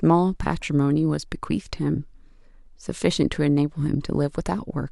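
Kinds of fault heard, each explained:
No technical fault can be heard anywhere in the recorded speech: the signal holds steady throughout, with no break, distortion or other defect in its level, timing or frequency content.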